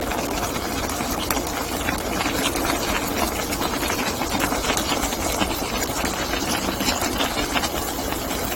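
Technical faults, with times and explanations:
Throughout, generation loss: swirly, hollow, smeared audio with blurred attacks and nothing above 16.6 kHz, likely from about four successive AAC encodes around 64 kbit/s.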